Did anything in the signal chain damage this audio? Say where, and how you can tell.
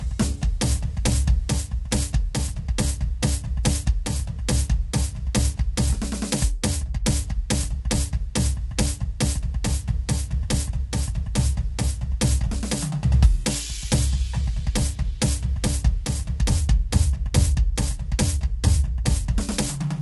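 Yes. The damage sits at the codec stage and runs through the whole music clip: the texture is plainly coarse and grainy, with a noisy haze filling the gaps between harmonics, and nothing at all above 11.6 kHz. That points to low-delay AAC compression, likely AAC-ELD at a low rate of around 32 kbps, whose short frames resolve pitch poorly. A spectrogram would show smeared harmonics, speckled noise between them, and a flat ceiling at 11.6 kHz.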